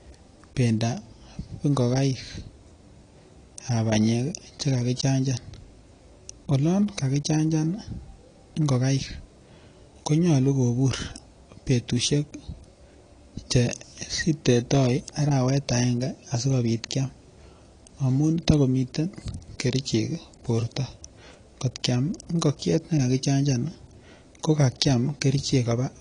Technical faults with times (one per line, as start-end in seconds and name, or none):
0.00-26.01 AAC compression